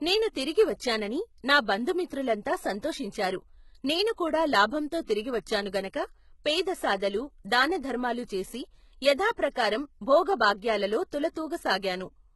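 Throughout the speech, the treble is rebuilt rather than kept: nothing sits above 11.8 kHz, and sibilants sound gritty and metallic, which points to heavy HE-AAC compression at a very low bitrate, likely near 16 kbps. Unlike plain lowpass dullness, the top stays bright but false. At 9.37 s, pre-echo places about 17 ms of hiss before an attack, softening it; unlike a click, the noise leads the onset rather than sitting on it.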